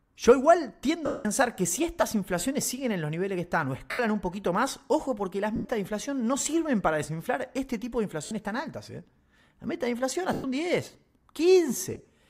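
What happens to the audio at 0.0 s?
Nothing goes wrong at 0.0 s; the audio is intact at that moment.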